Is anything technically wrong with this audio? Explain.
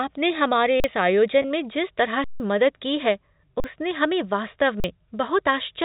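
Yes. The playback buffer ran dry several times, and one short stretch of network packets went missing.

Underrun with held sample: from 0.80 to 0.84 s, 3.60 to 3.64 s and 4.80 to 4.84 s, and for a longer 160 ms from 2.24 to 2.40 s just after "जिस तरह", the output buffer emptied and the converter froze on its last value. The sound stops dead on a flat, often nonzero level. Because the missing audio was skipped rather than resumed (about 40 ms each time, and around 150 ms for the long one), the speech jumps ahead when it returns.

Packet loss with pitch repetition: from 1.42 to 1.44 s, 20 ms of audio failed to arrive, which points to a couple of lost packets. The receiver filled the gap by repeating the last pitch cycle. This gap is too short to fade into silence, so it comes across as a brief, slightly buzzy hold in the voice. The telephone-band G.711 coding underneath adds only faint noise of its own.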